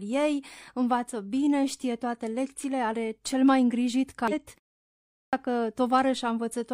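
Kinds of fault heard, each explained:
Damaged data in a compressed stream: corrupted bytes in the encoded speech make the decoder misread frames and lose sync while it hunts for the next valid header; right after "are cel mai îngrijit", a brief disturbance spans 4.28 to 4.33 s.
Clipped start after a pause: the output device drops into a sleep state during silence and needs time to wake; after a 0.52 s pause, speech resumes abruptly at 5.03 s, about 0.30 s of onset swallowed.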